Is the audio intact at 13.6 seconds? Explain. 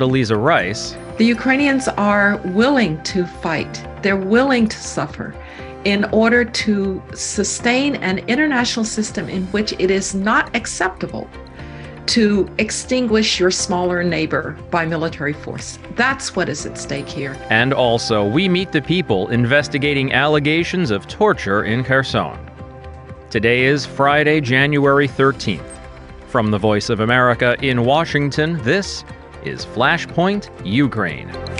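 Yes, the audio is intact at 13.6 seconds, with no dropout, click, distortion or other fault audible at that moment.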